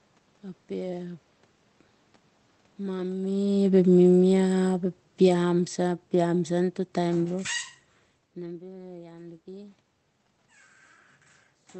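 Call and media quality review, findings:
Automatic gain falling, 3.06 to 7.48 s: speech level sinks gradually by about 10 dB. Probable component: AGC in the capture chain, reacting to input it judged too loud and stepping its gain down. Distinguishing cue: the room noise drops in step with the speech. A talker moving, as heard near 3 s and 8 s, shifts only the speech.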